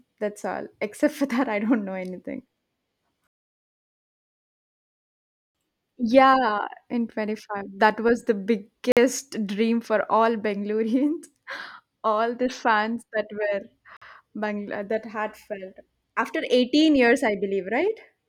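At 8.92 s, right after "was the" and before "dream for all", there's a gap between chunks, a hard-edged hole of about 48 ms. Another one hits at 13.97 s, about 5 s later. The audio's being delivered in 5-second pieces with silence dropped in at each join.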